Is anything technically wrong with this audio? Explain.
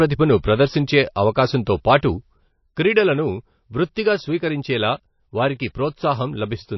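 Yes, two faults stand out in this speech.

Throughout, low-bitrate MP3 compression is the likely cause: starved of bits, the encoder discards everything above 5.8 kHz and leaves watery, swirly artefacts that are plainly audible.

From 2.48 s to the end, one channel drops out, likely a lost stereo feed, so the mono-summed level falls abruptly by about 6 dB.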